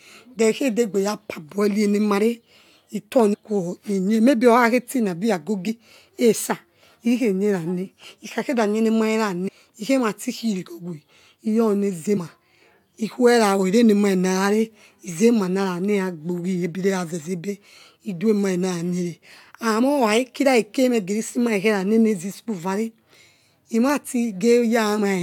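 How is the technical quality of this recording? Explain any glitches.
The recording has a recurring decoding fault, compressed frames skipped, at 3.33, 5.67, 9.47 and 12.16 s. At each point, whole blocks of the coded stream were never played, so the speech jumps forward. The frame length of about 21.3 ms fits a 1024-sample frame at 48 kHz. Roughly a fifth of a second vanishes at 3.33 s, a tenth at 5.67 s, nearly a third at 9.47 s and under a tenth at 12.16 s.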